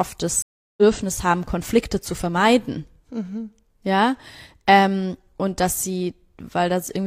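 At 0.42 s a stream reconnect cuts the speech: the connection dropped, and after 0.35 s of silence a fresh decoder resumes at 0.82 s, roughly a third of a second further on, fading in. The waveform shows a flat gap, and the spectrogram a blank vertical band.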